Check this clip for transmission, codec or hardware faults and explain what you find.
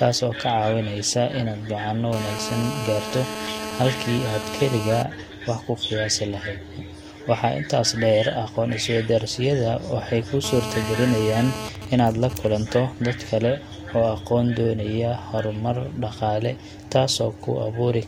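The speech carries interference from a nearby 2G mobile phone, in two forms.

GSM phone buzz runs from 2.13 to 5.02 s, ending just before "wax ku", and from 10.44 to 11.69 s, right after "waxay kuu", at about 8 dB and 7 dB below the speech. The phone's 217 Hz transmit bursts are rectified by the audio circuitry into a hard, raspy buzz. Mains hum is a smoother tone at 50 or 60 Hz.

GSM signalling bursts follow from 11.75 to 12.48 s, just before "dad kale", faint and well under the speech. During the pause in talking, the phone sends only sparse groups of bursts, so the steady buzz breaks into even ticks with a longer 217 Hz buzz twice a second.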